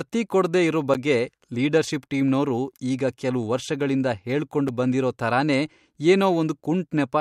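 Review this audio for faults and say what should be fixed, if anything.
Two blocks of digital silence: at 0.94 s, after "ಕೊಡ್ದೇ ಇರೋ", a 10.7 ms hole, and at 4.68 s, between "ಕೆಲ್ವ್ ವರ್ಷಗಳಿಂದ ಹೇಳ್ಕೊಂಡ್" and "ಬಂದಿರೋ ಥರನೇ", a 5.3 ms hole. Each time the speech drops straight to zero and returns without a fade, and since both gaps are under 15 ms they come across as a tick or dip rather than silence. The lengths fit a 512-sample and a 256-sample buffer that went out empty, likely because processing missed its deadline.

To prevent it, give the audio callback more headroom with a larger buffer or lighter processing, and trap invalid values before they reach the output.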